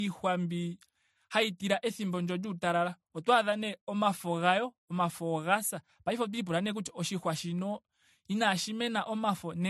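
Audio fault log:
Throughout: transcoding between lossy codecs, likely AAC then MP3 at low bitrates; two layers of compression artefacts are heard together, and nothing remains above 12.1 kHz.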